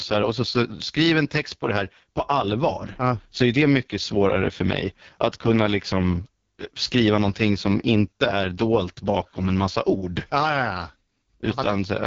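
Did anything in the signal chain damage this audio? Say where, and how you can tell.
Yes: the codec stage. AMR wideband (HD Voice) compression throughout leaves raspy, rough speech with nothing above 7.4 kHz, pointing to the lowest rate, near 6.6 kbit/s. Unlike narrowband telephony, the band extends past 4 kHz.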